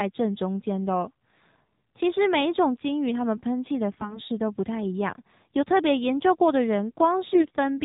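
The whole clip carries the sound of the AMR narrowband mobile codec. Nothing above 4 kHz survives, and the speech has the buzzy, synthetic edge of a low-rate mode, which fits AMR-NB at about 7.4 kbps, where a few excitation pulses per subframe must model each voice.

From 3.92 to 4.20 s, and again from 7.34 to 7.57 s, AMR bit errors appear. The poorly protected bits in a run of frames arrived corrupted, roughly a few percent of them, so pulse positions and fine gain values misfire. Pitch and level hold, but the voice turns hoarse and gargly.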